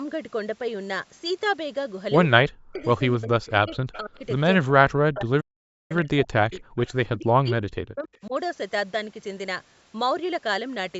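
Speech suppressed in double talk appears first at 2.43–2.81 s, where the speech dips by as much as about 40 dB. This is likely an echo canceller that could not separate the near talker from loudspeaker echo while both sides spoke, so it turned both down.

Echo leak follows at 2.80–2.85 s, as a faint copy of the speech about 30 dB down and delayed by 278 ms. Residual loudspeaker pickup likely slipped past the canceller and was sent back.

The suppression returns at 3.16–4.16 s with drops of about 40 dB. An echo leak overlaps it at 3.48–4.18 s, about 25 dB below the speech and again 278 ms late.

A longer suppression runs from 4.64 to 6.61 s, dipping the speech by about 40 dB. Inside it, a playback stall silences the output at 5.40–5.92 s for about 0.49 s. This is likely the player running out of data or being blocked, before it resumes.

Echo leak returns at 6.59–6.88 s, about 30 dB down and 278 ms behind.

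Suppression comes back at 7.06–8.33 s, again dropping the speech by about 40 dB. A last faint echo leak, about 40 dB down and 278 ms behind, appears at 8.13–8.17 s.

Throughout, the call microphone processing takes out the lowest bass, which is normal.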